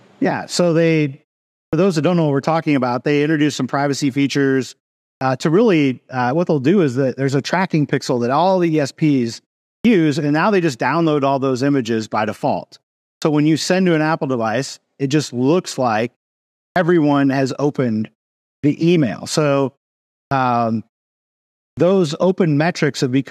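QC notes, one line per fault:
1.68, 5.17, 9.8, 13.17, 16.71, 18.59, 20.27, 21.73 s: clipped start after a pause. Each phrase, including "to really", begins abruptly with its onset shaved off by about 41–50 ms. After gaps of 0.42–0.92 s, the output device has dozed and wakes late.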